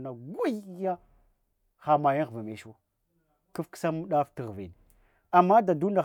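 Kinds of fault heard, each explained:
Nothing to flag in this one: the speech comes through without any technical faults to point out.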